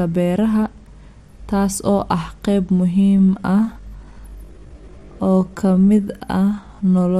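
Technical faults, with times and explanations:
2.99 s to the end, time-stretched section: right after "taas oo ah qayb" the pace suddenly drops to about 0.74 times normal speed while the pitch stays put, so everything from there on drags. That's likely software stretching this stretch to fill a longer slot, keeping the pitch by repeating short slices of the waveform.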